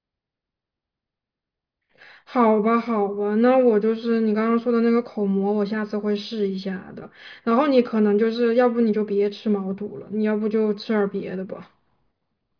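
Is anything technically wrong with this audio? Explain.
No, nothing technically wrong can be heard here.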